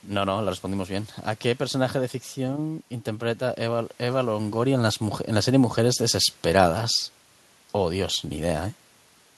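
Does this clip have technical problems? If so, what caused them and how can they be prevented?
No, nothing in this recording points to a technical problem.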